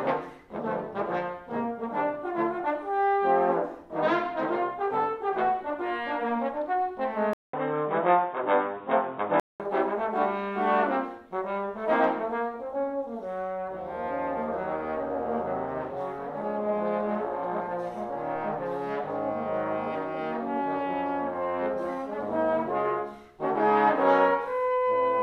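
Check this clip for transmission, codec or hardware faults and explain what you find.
One fault is present. From 7.33 to 9.60 s the sound turns dull and boxy, with nothing above 3.8 kHz, a 200 ms gap at the change, a level shift of a few dB and new background noise about 35 dB down. This fits an input switched to a poorer device, likely a narrower-band microphone or headset profile.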